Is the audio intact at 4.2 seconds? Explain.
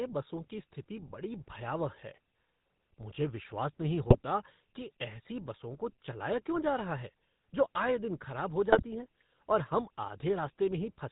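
No. GSM bit errors hit from 4.08 to 4.17 s, between "मुझे विश्वास नहीं" and "कि ऐसी बसों को". Corrupted filter and gain values produce squawks and gargling that reach up to that moment. Throughout the clip, the GSM full-rate codec also clearly damages the sound. Its pulse-driven vocal-tract model gives a buzzy, gravelly roughness with nothing above 4 kHz.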